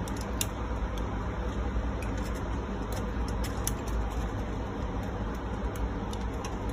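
No technical faults can be heard anywhere in the signal.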